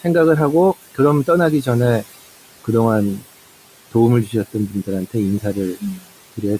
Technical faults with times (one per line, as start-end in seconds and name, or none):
0.00-6.60 noise suppressor artifacts
5.80-6.04 speech cut by the noise suppressor